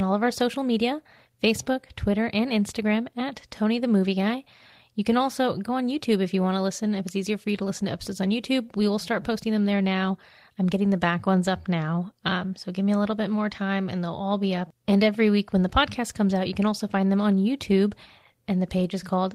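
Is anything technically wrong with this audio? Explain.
No, nothing technically wrong turns up in this speech recording.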